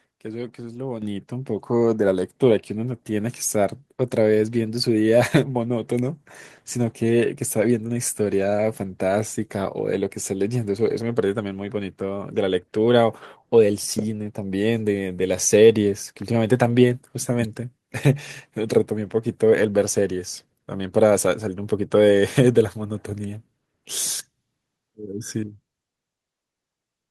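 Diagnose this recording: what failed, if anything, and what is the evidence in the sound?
The microphone volume stepped up at 1.02 s, a call-processing fault. Speech and background noise jump together by about 7 dB in a single step. The call software judged the input too quiet and raised the device's input gain at once instead of gradually.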